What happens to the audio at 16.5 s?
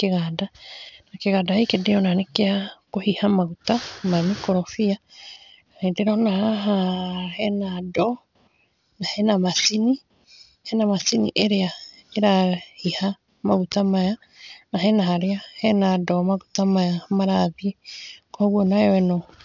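At 16.5 s you're hearing aliasing, which runs through the whole clip. Everything stops hard at 6 kHz, which fits a drop to 12 kHz without an anti-alias filter. The higher content folds back down as gritty, metallic junk only moderately below the speech.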